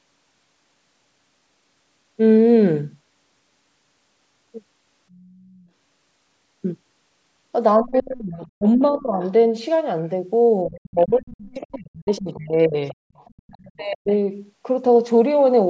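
A speech clip from a call, with two recurring faults. Faint traces of the other side's voice leak through at 5.12 s, 7.93 s, 8.63 s, 11.65–12.19 s and 12.88–13.94 s. They sit roughly 25 to 35 dB below the talker. The likely cause is loudspeaker echo the echo canceller failed to remove. The talker's speech is also suppressed in double talk, from 7.81 to 9.21 s, 10.66 to 12.77 s and 13.61 to 14.1 s. The voice dips by up to about 25, 35 and 40 dB. This likely happens because the canceller turns everything down when both sides speak.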